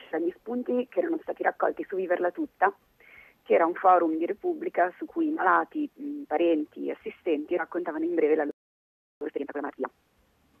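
At 8.51 s the sound stops dead and stays silent until 9.21 s, a gap of about 0.7 s. This is a playback stall. The player likely ran dry of buffered data or was blocked, so nothing reached the output.

From 9.21 s to 9.89 s comes a time-compressed catch-up. The player clears its backlog by dropping short slices and cross-fading the joins. The audio runs at 2.0 times speed but keeps its pitch, sounding rushed.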